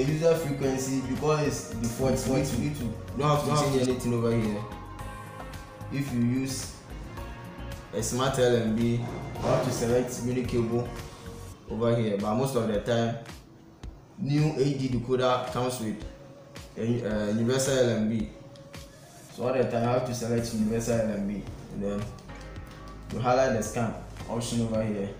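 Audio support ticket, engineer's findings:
Doubled audio track, 1.84 to 3.86 s: sound repeated about 300 ms behind itself, second copy roughly as loud as the first, dry, full-band, no decay. Hard onset and hard cutoff. Likely a second capture path with extra latency mixed into the bus.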